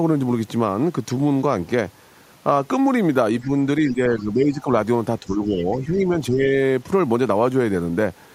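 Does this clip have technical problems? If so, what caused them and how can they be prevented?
Yes. Speech suppressed in double talk is the likely cause of the first problem: while both ends were talking at once, the echo canceller apparently couldn't separate the near talker from the loudspeaker echo and pulled the microphone signal down. The talker's speech dips by about 5 dB at 3.43 to 3.52 s, then by about 10 dB at 3.91 to 4.69 s, 5.20 to 5.56 s and 5.78 to 6.54 s, sounding ducked and patchy. A better-converged canceller with a less aggressive double-talk suppressor, or a headset, would prevent this.

The other side's voice leaking through is also likely from the echo canceller: it didn't fully remove the far-end sound that the loudspeaker fed back into the microphone, so scraps of that second voice remain. They appear briefly at 5.29 to 5.36 s and 5.58 to 5.76 s, roughly 25 to 30 dB below the talker, faint and fragmentary. 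Lowering loudspeaker volume, improving acoustic separation between speaker and microphone, or using headphones would stop the leak.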